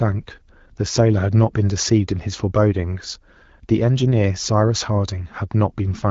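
No technical faults found.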